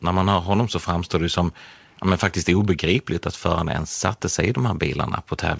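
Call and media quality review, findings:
No faults found: the speech passes through a wideband call path that stops at 8 kHz, consistent with G.722.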